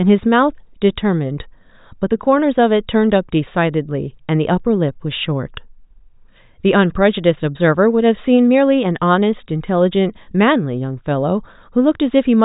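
Nothing's wrong here: it's a speech recording, and there's no technical fault to point to anywhere in it.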